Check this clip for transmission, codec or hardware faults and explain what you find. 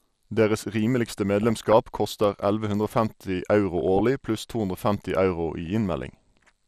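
There are two problems here: steady MPEG Layer II codec damage throughout, plus three short bursts of DAB burbling on top of it.

MP2 compression runs the whole way through the speech. It sounds dull and gurgly, with a granular edge. That's most likely a starved Layer II encode, around 80 kbps by the sound of it. There aren't enough bits, so upper sub-bands drop out and flicker while the remaining ones get coarsely quantised.

DAB burbling turns up at 1.41–1.73 s, 3.81–4.00 s and as a tiny blip at 5.66 s. It's the sound of weak reception. Bit errors, on the order of a few per thousand, have slipped past error correction and corrupted samples. Individual sub-bands get short blips of noise.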